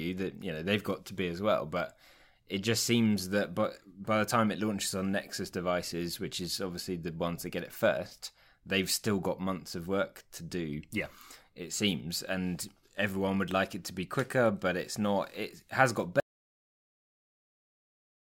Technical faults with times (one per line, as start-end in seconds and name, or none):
16.20-18.38 audio dropout to silence